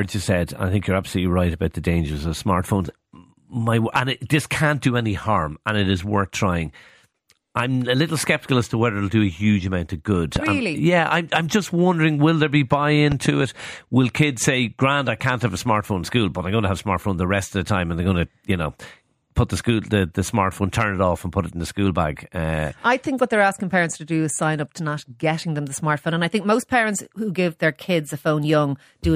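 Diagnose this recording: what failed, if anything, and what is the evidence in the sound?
Two loud pops, each a quick double thump over speech that carries on underneath: 10.36–10.49 s after "huge amount of good", roughly 15 dB up, and 13.12–13.28 s after "will there be buy", about 10 dB up. Likely an analogue wiring transient from a plug or static.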